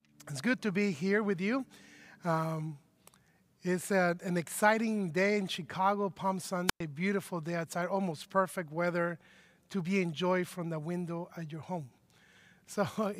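A wireless microphone squelch dropout occurs from 6.67 to 6.80 s: the FM radio link weakens, the receiver's squelch closes, and the speech gives way to a short burst of hiss and then roughly 108 ms of near silence before the signal recovers.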